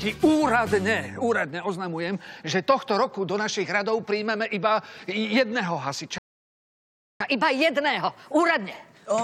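At 6.18 s the sound cuts out mid-flow and stays silent for about 1.02 s, until 7.20 s. This is a playback stall: the output went quiet because the player most likely ran short of data or had its thread blocked, then resumed once it recovered. From 7.20 s to the end, the audio runs fast and sharp, at 1.15 times normal speed and roughly two semitones high. This is catch-up at higher speed: the player resamples its backlog to win back the time lost in the stall.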